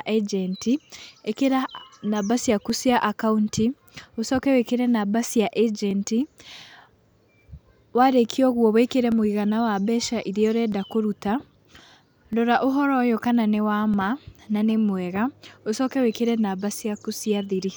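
From about 1.08 s to 17.15 s there's a click roughly every 1.61 s, most likely clock drift buffer slips from two clocks about 500 ppm apart.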